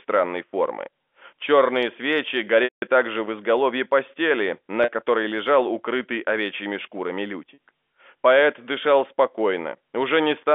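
At 2.64 s the speech freezes into a held, buzzy tone that fades to silence before returning at 2.82 s, a gap of 180 ms. Shorter 40 ms versions follow at 4.84 to 4.88 s and 7.54 to 7.58 s, each a brief buzzy hold. These are packet loss with pitch repetition: the receiver filled each gap by looping the last pitch period, fading it out over about 50 ms in the longer dropout. This happened over the band-limited G.711 telephone line.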